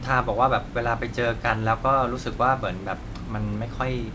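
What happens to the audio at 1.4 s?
Nothing goes wrong at 1.4 s; the speech passes through intact there, with the call codec's band limit at 8 kHz and the faint room noise about 36 dB below the speech.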